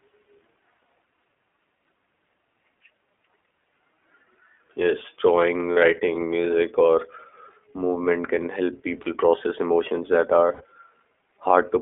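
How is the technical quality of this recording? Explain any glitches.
The quality is limited: the speech is coded narrowband throughout, and three short dropouts break it.

Throughout the clip the speech passes through the iLBC codec, a narrowband VoIP codec that codes each frame's excitation independently. Nothing outside roughly 300 Hz to 3.5 kHz survives, so sibilants are dulled and upper harmonics are gone. The coding damage is plainly audible as a rough, slightly synthetic texture on the voice, consistent with the 15.2 kbps mode and its 20 ms frames.

Lost iLBC frames occur at 5.72 to 5.77 s, 9.02 to 9.08 s and 10.54 to 10.62 s. Packets failed to arrive, and the decoder filled each gap by repeating the last pitch cycle mixed with noise. The first two gaps are 40 ms and the third is 60 ms. Each sounds like a brief held, buzzy vowel, and the voice snaps back cleanly right after because each frame stands alone.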